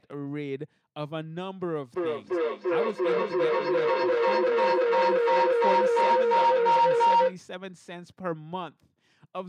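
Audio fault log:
1.93–7.42 s, feedback howl: two devices in the same room share the call, so each pass from microphone to loudspeaker gains level, building a tone around 1 kHz as the loop repeats roughly every 300 ms, and peaks about 12 dB above the speech.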